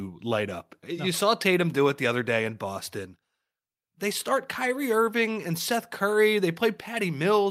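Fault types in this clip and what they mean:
No fault types are present in this clip.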